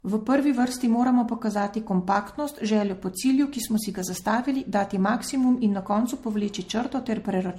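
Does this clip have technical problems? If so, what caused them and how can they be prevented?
Yes. The speech sounds swirly, smeared and hollow from start to finish, with soft consonant attacks and nothing above 16.5 kHz. That's most likely generation loss: the audio seems to have gone through MP3 around seven times at something like 64 kbit/s. Each re-encode quantises again on a shifted frame grid, so the noise and spectral holes build up to well beyond what one pass at that bitrate would do. To prevent it, keep a lossless master and encode to MP3 only once, at the final step.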